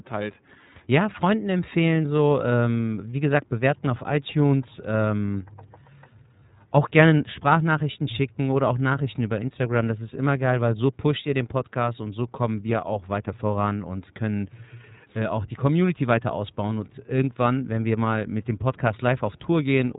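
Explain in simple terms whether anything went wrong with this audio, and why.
Something did go wrong, and it lasts the whole recording. The speech has passed through the iLBC codec, a phone-call codec built for low-bandwidth internet calls. It throws away everything above about 3.8 kHz, so the speech sounds narrow and muffled, like an old telephone. It also squeezes the sound in short chunks, which fits 30 ms frames, each handled on its own. That leaves a plainly audible rough, slightly synthetic edge from start to finish.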